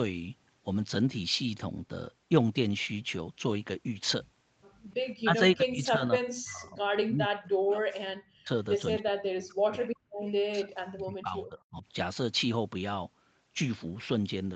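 From 5.23 to 6.81 s, 7.06 to 8.5 s, 8.98 to 9.9 s and 10.5 to 11.85 s, the speech sinks sharply and breaks into pieces. The deepest dips reach about 40 dB. This is likely speech suppressed in double talk. The echo canceller confused the talker with loudspeaker echo and turned both down.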